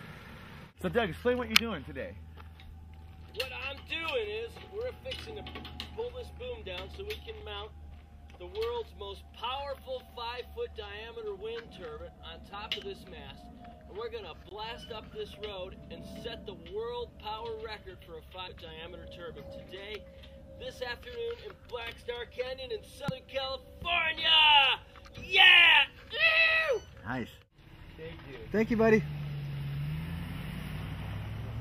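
At 7.40 s a block of digital silence drops the audio for about 5 ms: output simply stops and resumes with no fade, too briefly to register as silence, so it is heard as a tick or dip. The waveform shows a short flat run, and the abrupt edges appear as a thin vertical line on a spectrogram.

At 13.71 s damaged data in a compressed stream makes the decoder misread frames and hunt for the next valid header, leaving a brief disturbance such as a chirp, squawk, click or hole. On a spectrogram this appears as a narrow disruption in the normal pattern.

From 14.49 to 14.51 s a second dropout silences about 20 ms, long enough to be heard as a short hole. The waveform shows a flat gap, and the spectrogram shows a blank strip bordered by vertical edge lines.

The same compressed-stream damage returns at 18.46 s and again from 23.08 to 23.11 s, each time as a similar brief break in the decoded sound.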